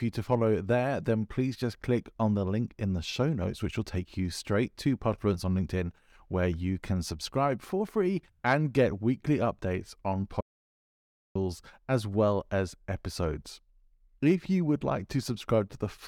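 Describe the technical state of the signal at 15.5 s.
At 15.5 s the speech signal is intact, with no audible fault at that moment.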